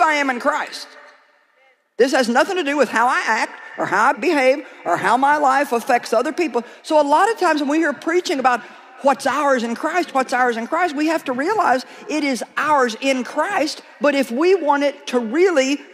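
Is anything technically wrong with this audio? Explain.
No, there's nothing technically wrong here that I can hear, so there's nothing to flag.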